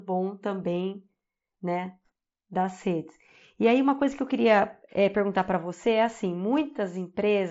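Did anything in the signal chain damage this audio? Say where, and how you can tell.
No, the speech arrives through what sounds like a wideband Bluetooth headset link running the mSBC codec, with the band ending just under 7.7 kHz as that codec's 16 kHz sampling allows, and nothing else in the chain has left a mark on the signal.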